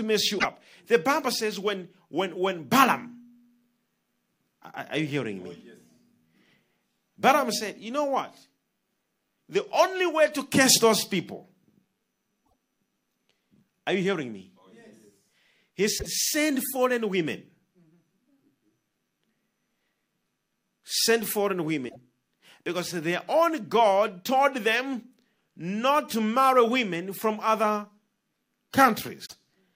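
Short chirps and squawks break through at 0.35–0.45, 12.42–12.52, 15.95–16.06, 21.85–21.96 and 29.25–29.33 s. Each is roughly a tenth of a second long. This is damaged data in a compressed stream: corrupted bytes make the decoder misread frames and lose sync until it finds the next frame header.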